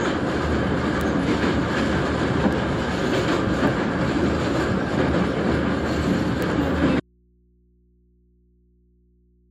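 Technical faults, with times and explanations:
1.01 s, 2.53 s, 3.67 s and 6.42 s, bit error spike: a single flipped bit throws one sample, or a very short run, by a power of two before it snaps back. The result is an isolated sharp tick, broadband and unrelated to the sound, not a dropout or a smeared click.
7.0 s to the end, audio dropout to a faint residue: the sound cuts off abruptly rather than fading, and what remains is mains hum some 35 dB below the previous level. The likely cause is lost input while the downstream path stayed live, picking up hum.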